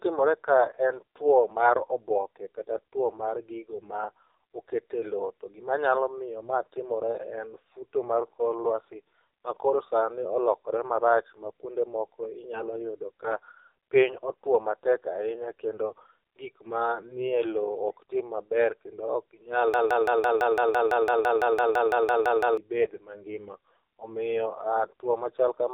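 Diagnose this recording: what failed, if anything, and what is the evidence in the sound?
The codec stage failed throughout: the speech has gone through the AMR narrowband mobile codec. Nothing reaches above 3.7 kHz, so the sound is boxy and lacks sibilance. The codec damage is heavy, with a buzzy, synthetic quality in which the vocal-tract model and sparse pulse excitation cannot keep up with the detail. That degree of coarseness fits one of AMR-NB's lower modes, around 6.7 kbps, where too few bits are spent on each 20 ms frame.

From 19.74 s to 22.57 s a broken-record loop is heard. A fragment about 168 ms long plays back to back roughly 17 times, identical on each pass, for nearly three seconds. The audio that should have filled that span is gone, and the sound does not resume from where it stopped. The likely cause is a stall in the player, encoder or stream buffer that kept re-sending the last fragment it held.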